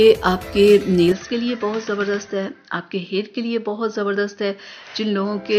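From 1.12 s to the end, the sound suddenly goes duller, with nothing above 6.2 kHz, drops roughly 5 dB and picks up a new noise floor about 40 dB down, with no gap at the change. That's likely the input switching to a poorer device.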